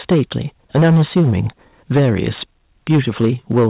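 From 0.02 to 0.22 s the loudest peaks have a harsh, crackling edge. This is microphone overload, likely from input volume set too high. The peak tops hit the converter's limit and are sliced off, about 8 dB over. At 0.12 s the level falls suddenly by about 2 dB. This is the microphone volume being stepped down, likely by the call software reacting to the clipping. The crackle returns from 0.75 to 1.4 s, 1.95 to 2.42 s, and 2.9 to 3.67 s, at about 9, 14 and 8 dB over. A second 2 dB drop comes at 3.25 s. Everything sits below 4 kHz, which fits a G.711 call codec.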